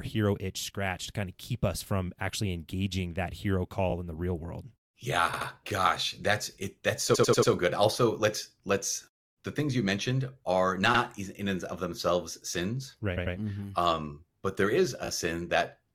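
Repeated frames in this speech clip: short runs of compressed frames were delivered more than once, so the decoder replays them and the speech stutters. It happens at 3.9 s (between "actually engaging that hero" and "in the real world"), 5.32 s, 7.14 s (four extra plays, adding 0.37 s), 10.93 s (before "in and of themselves"), 13.16 s, and 15.05 s (after "um but there"). The repeated blocks run from 17.4 to 92.9 ms.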